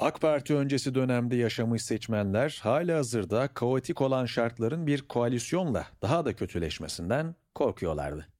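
From 6.94 s to the end, the speech suddenly runs about 5.3% fast and rises in pitch by roughly 90 cents, just short of a semitone, so the talker seems to lurch sharp and hurried at once. Speed and pitch move together, with no sign of separate pitch processing. This is likely a drift correction step, where clock-matching software abruptly raised the playback rate to drain a buffer that had grown too full.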